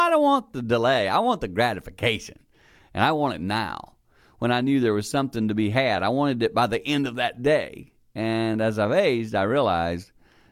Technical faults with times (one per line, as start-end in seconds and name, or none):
none